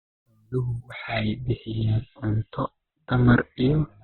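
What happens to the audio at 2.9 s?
At 2.9 s the speech is in the middle of a stretch played from an adaptive stream at a lower bitrate. The stream switched down at 0.92 s and stays there to the end of the clip. The connection slowed, so the player fetched a leaner encoding. The sound points to Opus dropping from about 64 kbit/s to about 12 kbit/s. Treble vanishes and the voice turns muffled. On a spectrogram, energy stops sharply at a flat ceiling near 4.1 kHz. The waveform shows no gap at the switch.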